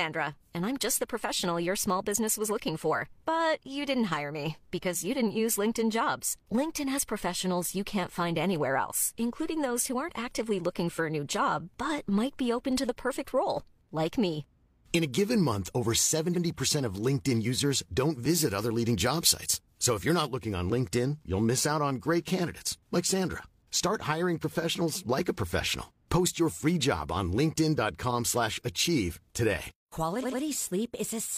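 A short stutter at 16.30 s makes one slice of speech play twice. This is repeated frames: a 92.9 ms block, which fits two compressed frames, was written or sent a second time, so the decoder plays that stretch again and adds 92.9 ms to the running time. At 30.19 s the same fault returns more strongly. The same 92.9 ms block plays three times in a row, giving a brief machine-gun stutter, and that repeat adds 185.8 ms.

Between 18.30 and 20.30 s the speech turns thin, bright and hissy, and sibilants jump forward. This is pre-emphasis left on. The treble was boosted for recording or transmission, but the matching de-emphasis cut was never applied, so high frequencies stand about 8 dB higher at 10 kHz than at 1 kHz. The shape of the tilt is consistent with the CD 50/15 µs emphasis curve.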